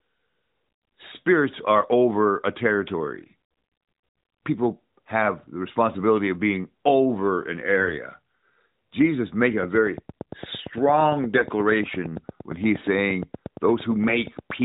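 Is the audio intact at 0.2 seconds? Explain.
Yes, at 0.2 seconds the speech is intact, with no fault at that point, only the narrowband sound of the AMR mobile codec at 12.2 kbps, which leaves nothing above 4 kHz.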